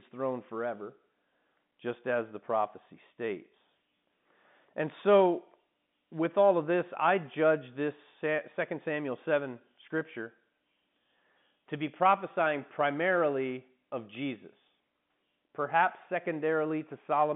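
No technical faults are audible.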